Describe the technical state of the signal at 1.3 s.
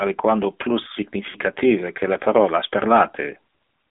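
Right after "aliquando plus", from 1.30 to 1.37 s, the speech smears into a brief drawn-out warble and sags before returning rough. These are lost AMR speech frames: the decoder repeated its last pitch and vocal-tract settings with falling gain across a 40 ms gap, which fits two lost 20 ms frames.

Around that moment the speech sounds buzzy and synthetic, confined to roughly 250 Hz to 3.6 kHz with nothing above. That is the AMR narrowband mobile codec, whose pulse-driven vocal-tract model causes plainly audible damage, consistent with a low rate such as 7.4 kbps.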